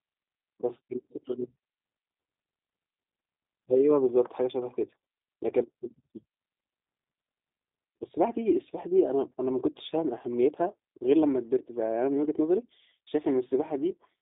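G.729 codec damage runs throughout the speech. The 8 kbit/s coder rebuilds each 10 ms frame from a vocal tract filter, a pitch predictor and a few pulses. Nothing above about 3.8 kHz survives, the line band sits near 200 Hz to 3.7 kHz, and the voice sounds plainly rough and synthetic.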